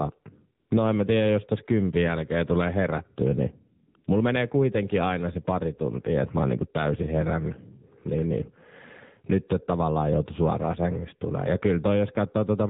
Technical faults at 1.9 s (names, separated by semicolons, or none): AMR narrowband mobile codec